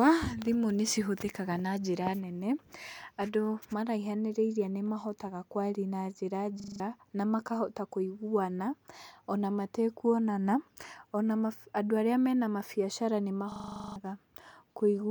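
At 6.6 s and again from 13.52 to 13.96 s, a system hang loop replays one 40 ms piece of speech, giving a rasping 25 Hz buzz. The driver stalled while the hardware kept cycling its ring buffer, losing about a fifth, then about two fifths, of a second.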